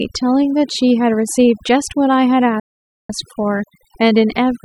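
From the start the whole clip has overdone noise removal on it. The noise reduction was pushed far too hard, so every frequency band that drifts near its idea of the noise floor gets clamped down or shut off, and the softer parts of the voice get dragged out with it. The gaps between phrases drop to near silence with little twinkling specks.

Then at 2.60 s the sound just stops dead for about half a second, picking back up at 3.10 s, a gap of roughly 495 ms. That's a playback stall: the output goes silent in mid-flow and resumes afterwards. The likely cause is the player running short of data or its audio thread getting blocked, so nothing was sent to the output until it caught up again.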